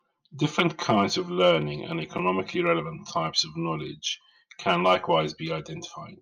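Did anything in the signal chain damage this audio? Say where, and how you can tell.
Yes. One channel arrives around 5 ms behind the other, and when the two are summed to mono the shared content cancels at evenly spaced frequencies. The channel delay (comb filtering) produces a first notch near 100 Hz, with further notches every 200 Hz above it. This gives the speech a hollow, phasey colour from start to finish. That points to a driver or buffer stage holding one channel back before the mono fold-down.

From 0.1 s to 6.21 s there is a soft rattle of tiny ticks, roughly every 30 ms, about three hundred in all, each the size of a single sample. These are clock slip clicks, likely caused by two converters running on unsynchronised clocks that differ by something like 700 ppm. At that error the mismatch adds up to a whole sample often enough for one sample to be dropped or repeated at each tick.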